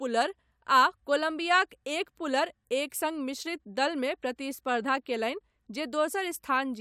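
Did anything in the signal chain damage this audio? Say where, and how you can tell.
No, nothing damaged it.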